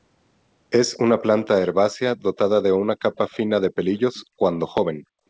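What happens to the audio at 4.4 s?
At 4.4 s the background gated by the echo canceller recovers: from 4.27 s the canceller ducked the microphone by about 40 dB for roughly a tenth of a second. Unlike a packet-loss gap, the room tone fades down and back without clicks or concealment artefacts.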